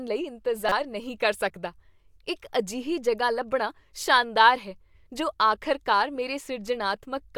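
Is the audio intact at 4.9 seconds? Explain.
Yes, the speech at 4.9 seconds is intact, with no audible dropout, click, distortion or other fault at that moment.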